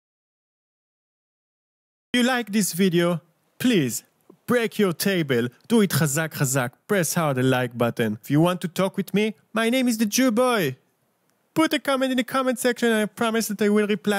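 The audio opens in an audio dropout to silence. From 0.0 to 2.14 s there is nothing at all. It is silence, with no room tone or hiss underneath. The gap is already under way when the clip begins. Sound then enters abruptly at 2.14 s, mid-flow rather than with a natural onset. The likely cause is a lost input, such as a disconnected device or a mute, while recording continued writing zeros. Whatever happened in those two seconds is gone.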